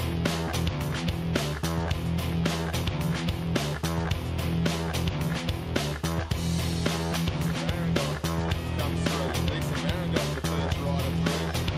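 Nothing goes wrong anywhere in this recording; there's not a single glitch, dropout or odd moment to point to from the first second to the last.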